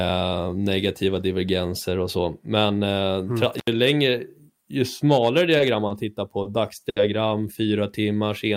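At 3.58 s an intermittent contact opens the signal path for about 78 ms, until 3.67 s. A loose plug or cable briefly loses connection, so the speech drops out rather than fading. Each edge of the gap carries a small crackle where the contact breaks and remakes, and only a faint residue of hiss fills the silence before the signal snaps back.

From 5.57 s a series of short stalls from late packets follows. In each, a packet misses its playout deadline, the jitter buffer runs dry, and the receiver holds the last stretch of sound until the data arrives, then continues from where it stopped, so nothing is lost but playback slips later. Just after "längre ju smalare", at 5.57 s, the sound hangs for 20 ms. Before "tittar på", at 5.87 s, it hangs for 30 ms, and again for 30 ms at 6.42 s. The longest, 70 ms at 6.89 s after "tittar på", is a held sound.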